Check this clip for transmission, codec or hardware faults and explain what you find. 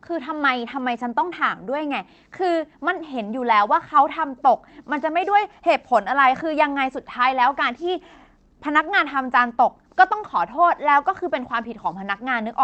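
No transmission, codec or hardware faults are audible in this speech; the call path's band-limiting and coding texture stay steady throughout, consistent with an Opus link restricted to about 8 kHz.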